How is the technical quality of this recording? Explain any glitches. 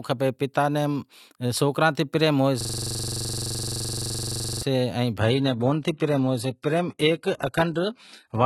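The recording has two clear glitches.

A system hang loop runs from 2.61 to 4.62 s, just after "تے پریم". A 42.67 ms slice repeats at 23.4 Hz as a buzzing stutter. This fits a 2048-sample buffer cycling while the system froze.

From 5.20 s to the end, the sound suddenly thins, with no gap. Nothing remains above 11.8 kHz, and artefacts rise. This is an adaptive stream at a lower bitrate, seemingly switched to low-rate HE-AAC.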